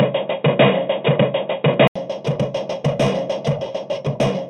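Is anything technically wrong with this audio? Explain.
Yes, two faults are audible. From the start to about 1.96 s the sound is dull and boxy, with nothing above 3.8 kHz, and it then opens up after a silence of 80 ms, with a level jump of roughly 5 dB and a different faint background noise. This is likely an input switched to a poorer device, whose narrower band, own tone and level colour that stretch until the better input takes over. At 1.74 s there is a brief flat spot of about 1.45 ms, an underrun with held sample. The output buffer ran dry, so the converter froze on its last value, and the length fits a 64-sample gap. Because playback resumed where it stopped, it passes with only a soft tick rather than a click.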